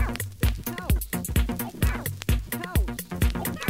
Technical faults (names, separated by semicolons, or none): none